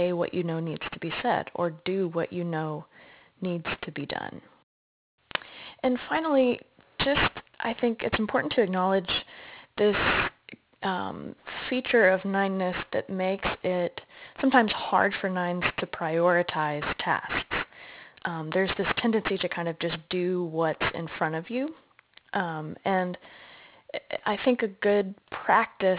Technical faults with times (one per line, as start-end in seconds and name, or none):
0.00-25.98 aliasing